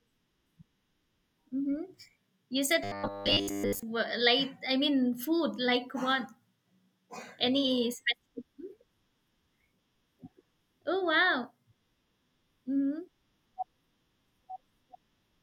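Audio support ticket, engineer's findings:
Robotic sound from repeated short buffers, 2.84 to 3.83 s in speech. Rigid metallic buzz at 100 Hz, fitting a 10 ms repeated block; most of the real audio skipped, rough speech contour survives. Likely cause: playout/jitter buffer underrun, concealment looping the last block. Unlike plain dropouts: no silent gaps. Unlike codec warble: the pitch stays fixed.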